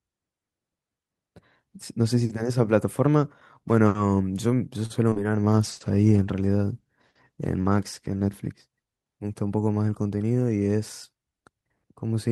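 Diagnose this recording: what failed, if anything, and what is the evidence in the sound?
Short stall from a late packet, network and jitter buffer: at 4.85–4.92 s the sound is held about 45 ms, then resumes with nothing missing, unlike loss.

Short concealed packet loss, network: at 5.10 s and 5.14 s, two back-to-back 20 ms gaps are smeared over. Here audio is actually missing, unlike a stall.

Call bitrate drop, codec: from 5.51 to 10.17 s Opus falls from 48 to 18 kbps, lowest for 2.37 s. The sound turns muffled and rough, not in brief glitches.

Jitter buffer speed-up, call processing: at 10.09–10.31 s the speech runs at 113% speed with unchanged pitch, trimming a few hundredths of a second. The hurrying shows it isn't loss.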